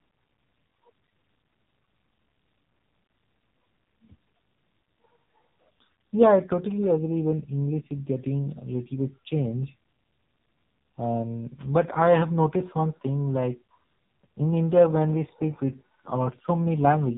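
From start to finish the speech sounds buzzy, muffled and synthetic, with nothing above 4 kHz. That is the AMR narrowband mobile codec: heavy damage from rebuilding the voice as a vocal-tract model fed by sparse pulses, which fits a low bitrate near 5.9 kbps.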